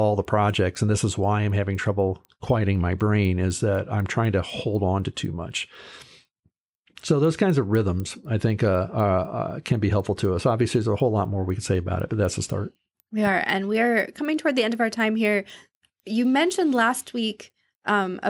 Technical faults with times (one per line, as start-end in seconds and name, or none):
0.00-18.29 resampler restarted on every block